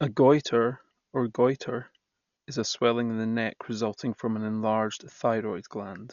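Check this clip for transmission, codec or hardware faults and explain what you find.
There is one fault, and it runs through the whole speech clip. The speech sounds dull and boxed-in, with nothing above 7 kHz, and a rough, fluttering hiss hangs around voiced sounds. The cause is likely Dolby Digital compression at a starved bitrate, which fits about 48 kbps. The encoder cut the band and left many frequency lines without real detail, so the decoder filled them with noise.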